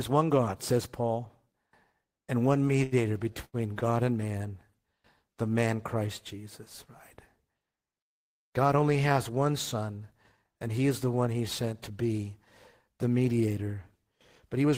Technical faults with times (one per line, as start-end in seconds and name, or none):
2.83-2.94 short stall from a late packet
3.45-3.83 short stall from a late packet